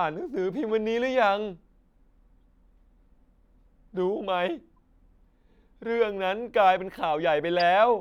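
Corrupt frames decoded in this speech clip: damaged compressed data was played rather than concealed, so misread gains and codes threw energy to wrong frequencies. The result is a brief glitch at 0.69 s and a short, louder one at 7.59 s.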